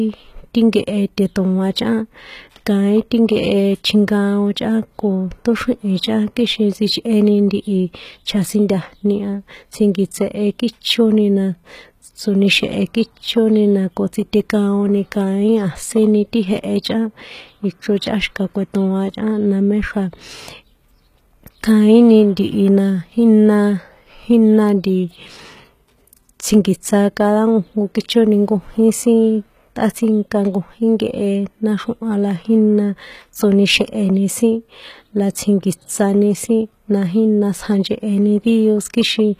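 HE-AAC compression throughout: nothing above 14.9 kHz, and s sounds turn gritty and metallic, likely from treble rebuilt by copying lower bands upward at a very low bitrate.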